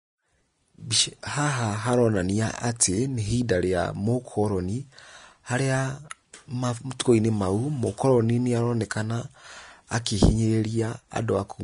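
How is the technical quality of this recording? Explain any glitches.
Technical quality is on the rough side, with one problem running the whole way through the speech rather than any isolated glitch.

From start to finish there's a hard ceiling on the top end: nothing above about 10.6 kHz, and the treble that remains sounds hissy and grainy. That's most likely Vorbis compression at a low setting, and the heaviness of the damage points to a low bitrate, around 35 kbps. To save bits, the encoder chops off the highest frequencies and quantises the upper detail so coarsely that it turns into noise of similar energy, which is why sibilants and consonant attacks come across smeared and fizzy instead of crisp.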